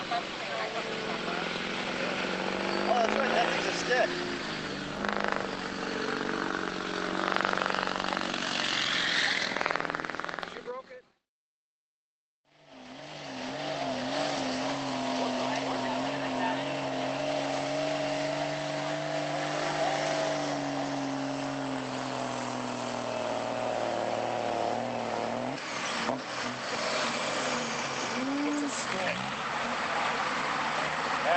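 No technical faults occur at any point in this recording.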